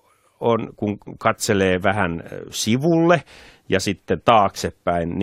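Nothing technically wrong turns up anywhere in this bit of speech, so there are no times or causes to point to.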